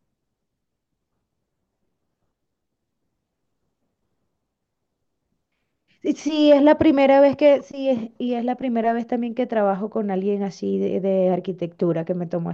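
No technical faults are audible.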